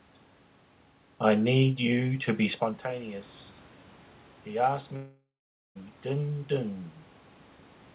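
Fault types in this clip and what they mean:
Long network dropout: From 4.96 to 5.78 s the sound breaks off. The last fragment is drawn out into a buzzy tone that fades, followed by about half a second of near-silence, and then audio resumes with roughly 0.8 s lost. This is likely a stretch where packets stopped arriving and the receiver filled the gap. On a spectrogram, the band below 4 kHz smears into flat, repeating streaks, then goes dark. The waveform shows a decaying envelope, then an almost flat line.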